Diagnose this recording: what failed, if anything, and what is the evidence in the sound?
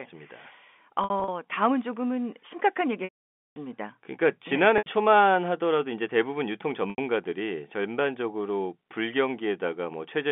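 The network stage failed: packet loss with pitch repetition, carried over a telephone-band G.711 line. From 1.04 to 1.28 s, scattered losses (the longest run 60 ms) produce brief buzzy holds, and 80 ms losses at 4.78 s and 6.90 s do the same. At 3.04 to 3.56 s, a 520 ms loss outlasts the concealment. The repeated cycle fades to silence, and speech then cross-fades back in. A spectrogram shows flat, frozen harmonic stripes. The waveform shows identical cycles shrinking in amplitude, with gap lengths that fit 20 ms packets.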